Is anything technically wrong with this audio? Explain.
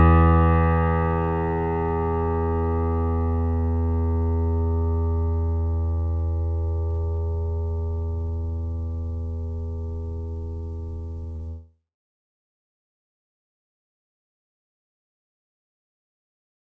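Yes. There is one short concealed packet loss, from 11.36 to 11.42 s. About 30 ms of the music never reached the decoder in time. The receiver covered the gap with roughly 32 ms of made-up sound. It extended the last tones where they were pitched and used shaped noise where they were not. Then it faded back into the real signal. The result is a brief smear or wobble in the music. The clip passed through a call path, and nothing is heard above 8 kHz, which fits a wideband call codec such as G.722.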